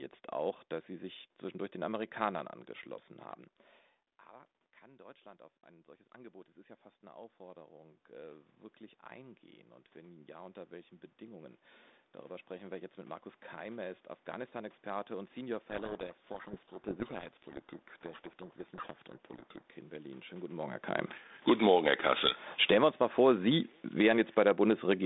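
From 4.31 s to 20.44 s the voice and room noise swell together, slowly, by about 21 dB. The sound dropped by about 21 dB as the talker moved back near 3.5 s, and the automatic gain rising climbed to make up for it.

Between 15.7 s and 19.70 s the speech is buried in harsh, grinding distortion. This is a codec payload misread: the receiver takes the G.726 code words in the wrong bit order, so every sample is rebuilt from scrambled differences until the packing agrees again.

From 21.34 s, after the talker moves again around 20.5 s, the sound sinks with its background by about 13 dB until 24.53 s, an automatic gain falling. Overlapping it, from 21.81 s to 25.0 s, a second automatic gain rising lifts the level back by about 4 dB.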